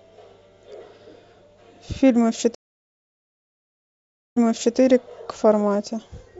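At 2.55 s a stream reconnect: the connection drops, leaving 1.8 s of flat-line, blank-spectrogram silence, then a fresh decoder resumes at 4.76 s, replaying the last 0.42 s.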